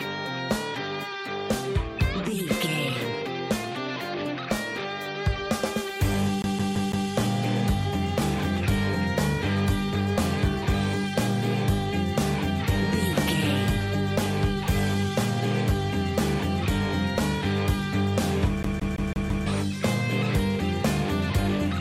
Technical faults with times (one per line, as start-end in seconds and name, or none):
6.42-7.09 CD stuck on one turn
18.63-19.46 CD stuck on one turn